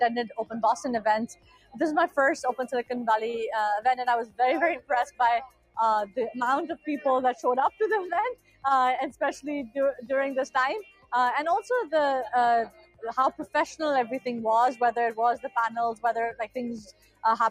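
A noise suppressor applied to music or sounds stays active across the whole clip, treating sustained, steady content as noise and pulling it down, so the level swings by about 10 dB: attacks pass while held parts and decays sink and pump.

Sound cut by the noise suppressor occurs at 1.32–1.76, 5.47–5.77, 8.35–8.64, 10.83–11.12, 12.69–13.03, 13.39–13.55 and 16.87–17.23 s. In each, the suppressor clamps harder for a few tenths of a second, cutting the sound by about 14 to 18 dB.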